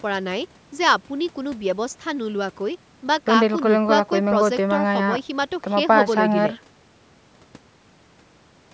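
Nothing's wrong with this speech recording; it has simply been through a call's microphone processing, so the lowest bass is trimmed away and nothing sits above about 8 kHz, which is just how that path normally sounds.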